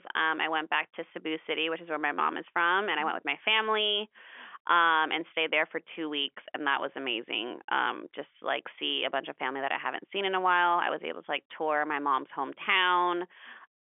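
No technical faults can be heard anywhere in the recording. The speech comes through G.711 telephone coding, so it sits in the usual telephone band of roughly 300 Hz to 3.4 kHz with nothing above about 3.6 kHz.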